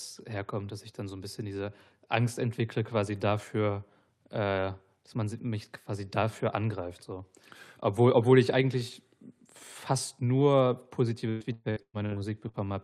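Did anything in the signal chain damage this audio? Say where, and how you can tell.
Yes. The network stage shows repeated packet loss with a robotic sound from 11.29 to 12.57 s: about six dropouts, the longest 119 ms, each bridged by stretching the previous sound. Concealment covers roughly 40 percent of that stretch, producing choppy speech with pieces missing.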